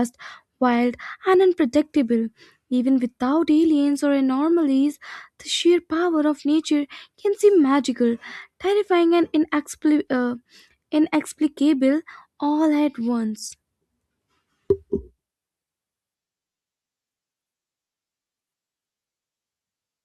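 Nothing in the signal of this speech recording points to a technical fault at any point.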